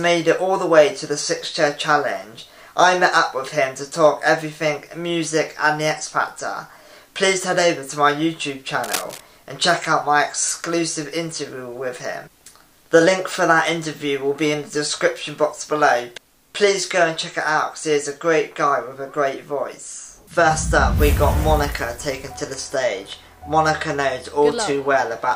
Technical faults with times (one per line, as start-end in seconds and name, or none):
8.83-9.20 cable scratch noise